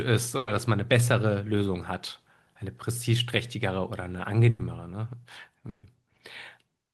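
Bursts of packet loss occur at 0.37–0.49 s, 4.49–4.61 s and 5.69–5.85 s. Each time, a run of packets never arrived in time, and the receiver papered over the hole by stretching the last speech it had, fading it as the gap continued. The first two patch 100 ms; the third patches 140 ms and dies away into about 100 ms of silence. Each sounds like a brief smeared buzz or hiss before speech picks up, with that stretch of speech lost.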